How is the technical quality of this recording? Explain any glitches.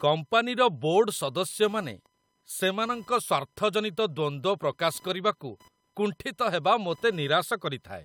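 The recording carries one fault, computer activity noise, present throughout the speech. Fluctuating processor, graphics or mouse load is modulating the shared ground of the audio circuit, injecting a buzzy chirping at a pulse rate of around 1 kHz, roughly 35 dB below the speech, rising and falling with the computer's activity rather than with the talking.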